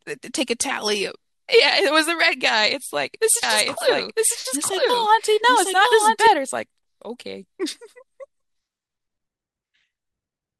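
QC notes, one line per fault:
3.43–6.27 s, doubled audio track: full-band copy about one second late at equal level, likely a slower second capture; spectrogram shows shifted duplicate patterns, abrupt edges.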